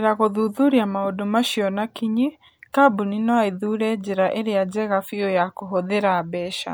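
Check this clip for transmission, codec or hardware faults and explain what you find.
One codec fault is audible, a single pre-echo at 2.73 s. A hiss of about 17 ms precedes a sharp speech onset, and that onset sounds softened. The transform codec spread quantisation noise across the block, so noise sized for the loud attack leaked into the quiet moment before it. Unlike a click or post-attack ringing, the smear arrives before the attack.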